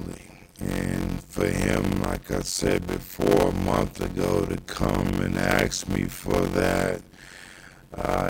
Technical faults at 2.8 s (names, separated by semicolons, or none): block size mismatch (padded)